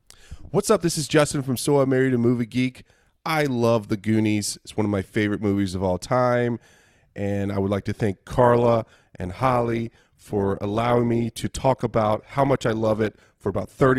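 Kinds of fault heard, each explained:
Adaptive stream at a lower bitrate: from 8.25 s the speech suddenly goes swirly with no gap, which fits the stream dropping from roughly 64 to 16 kbit/s.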